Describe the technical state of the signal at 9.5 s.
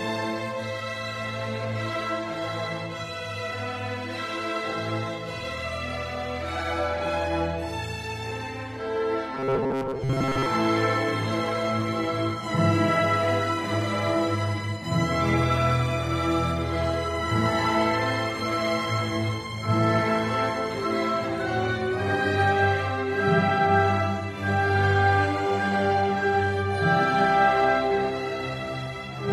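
At 9.5 s you're right in the middle of a stretch of robotic sound from repeated short buffers, running from about 9.35 to 10.46 s. New audio is likely arriving too slowly, so the playback side keeps looping a tiny slice of about 7.5 ms instead. Most of that second is repeats rather than fresh material. The looping stamps a fixed 134 Hz buzz on top, so the sound goes rigid and metallic while only loosely tracking what it should be.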